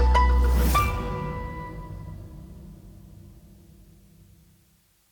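Low bit depth with dither runs throughout: a steady, even hiss roughly 40 dB below the audio, without distortion, fitting 9-bit quantisation with dither added before rounding.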